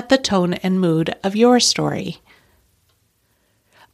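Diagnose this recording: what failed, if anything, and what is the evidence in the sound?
Nothing in the chain has failed here; the recording holds together with no audible fault at any stage.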